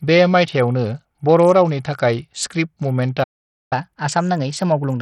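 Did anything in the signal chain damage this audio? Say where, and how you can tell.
Yes. At the codec stage the speech shows heavy damage from what is likely Bluetooth SBC compression: the treble flickers and drops out, and gritty quantisation noise with aliasing sits on the signal throughout. That fits a small bit pool, around 64 kbps, starving the upper sub-bands.

At playback there is a playback stall from 3.23 to 3.73 s: the speech cuts off mid-flow into silence for about 0.48 s before resuming. The player likely ran short of buffered data or its output thread was blocked.

From 3.73 s to the end, the stall is followed by catch-up at higher speed. The speech runs 1.15 times faster and rises by about two semitones as the player resamples its backlog to recover the lost time.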